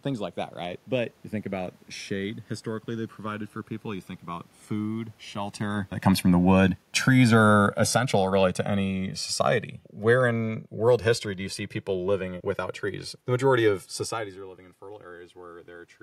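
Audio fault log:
Throughout: channels drifting apart. The two channels run on separate clocks that differ by roughly 150 ppm, so the delay between them slowly grows to a few milliseconds. Summed to mono, comb notches sweep through the spectrum. It sounds like slow flanging.
5.62 to 11.39 s: automatic gain falling. The gain control judged the input too loud, or its background noise too strong, and lowered its gain gradually by about 9 dB. The sound starts loud, then sinks steadily. The background noise drops together with it.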